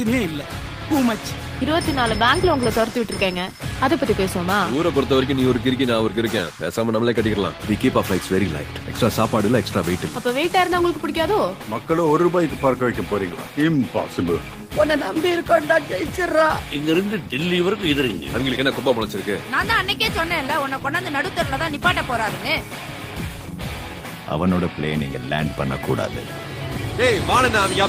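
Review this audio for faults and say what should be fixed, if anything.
Nothing stood out on listening, so there is nothing here that needs fixing.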